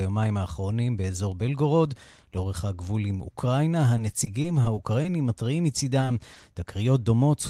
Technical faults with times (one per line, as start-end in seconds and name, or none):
3.97-5.07 repeated packet loss (robotic sound)
6.01-6.44 repeated packet loss (robotic sound)